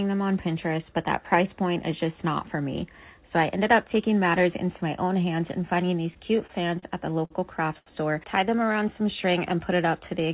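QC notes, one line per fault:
6.14 to 7.32 s, repeated stalls (stutter): five separate holes in the stream here, each one covered by the receiver carrying on the last bit of sound, about 129 ms filled in all and the longest gap 53 ms. Packets kept turning up late, so the jitter buffer kept running dry and the playback catches and drags across the stretch. Nothing actually goes missing; around a tenth of that span is stand-in sound.
7.78 to 7.88 s, short stall from a late packet: one packet just didn't show up on time, the buffer emptied, and the receiver stretched the last sound for about 79 ms until it landed, then picked up right where it left off. You hear a single sound held a touch too long, maybe with a faint buzz or dip. The playout delay grew by that same 79 ms afterwards.
8.59 to 8.95 s, jitter buffer slow-down: the buffer wanted more in reserve, so it repeated single pitch periods or slivers of pause over and over, adding about 42 ms. 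That runs this bit at 91% speed with the pitch unchanged, so sounds come out drawn out, possibly with a slight warble. It's all on a G.711 A-law call path, which is why nothing sits above 4 kHz.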